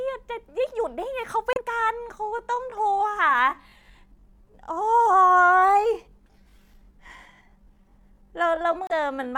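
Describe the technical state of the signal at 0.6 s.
At 0.6 s the speech signal is intact, with no audible fault at that moment.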